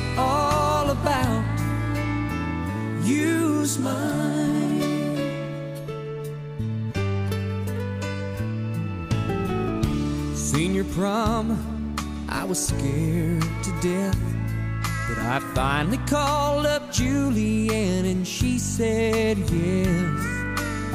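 No technical fault can be heard anywhere in the audio. There is no moment that needs a time mark or any correction.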